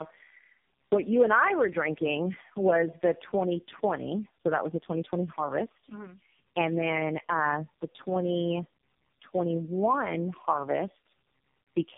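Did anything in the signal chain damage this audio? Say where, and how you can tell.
Yes. Tandem speech coding at the codec stage, throughout: the sound is rough, muffled and warbly with nothing above 3.7 kHz, which fits about four low-rate speech coders each re-encoding the previous one's output.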